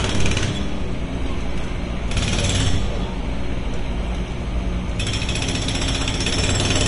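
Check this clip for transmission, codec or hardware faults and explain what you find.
One codec fault runs through the whole clip: heavy lossy compression, likely Vorbis compression at a low setting, consistent with a bitrate around 35 kbps. Nothing survives above about 10.5 kHz, and the treble that remains was quantised so coarsely that fine detail turned into noise of similar energy. The sound is plainly hissy and grainy, with roughened tones and softened attacks. A spectrogram shows a hard ceiling at 10.5 kHz and speckled, patchy energy below it; the waveform's transients look smeared.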